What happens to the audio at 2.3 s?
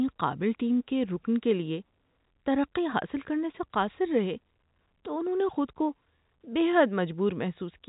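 Nothing goes wrong at 2.3 s; the speech carries on intact through that moment within its ordinary telephone band.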